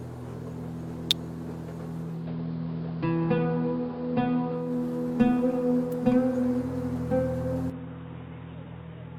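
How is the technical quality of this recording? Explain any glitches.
The recording has three kinds of glitch, spread over its second half and its start.

At 1.11 s and again at 5.92 s there is an electrical switching spike. Each is a sharp snap, shorter than 10 ms, laid on top of the sound. It likely comes from a nearby switch, motor or static discharge. The arc radiates a brief burst of energy, and the audio line picks it up. The sound underneath carries on unbroken.

From 1.99 s to 4.81 s the audio shows digital radio blending to analogue. The receiver lost its digital stream and cross-faded to the AM broadcast of the same station. Each cross-fade takes about a third of a second. AM carries a narrower band, so the treble drops away. Hiss rises to roughly 35 dB below the signal. The level dips by about 1 dB.

From 7.70 s to the end, the input switched to a poorer device. The change is likely a switch to another microphone or a headset's call profile. 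There is no gap at the switch. The sound turns dull and boxy. A new background noise sits roughly 30 dB down, and the level falls by around 5 dB.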